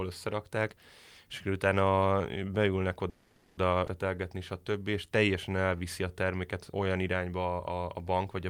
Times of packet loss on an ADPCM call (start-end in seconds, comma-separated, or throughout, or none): none